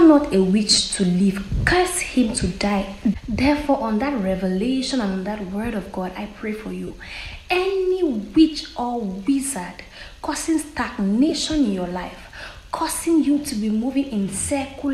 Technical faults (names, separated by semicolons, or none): lost LE Audio frames